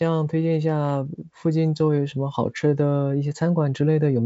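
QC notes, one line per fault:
No faults found in this clip.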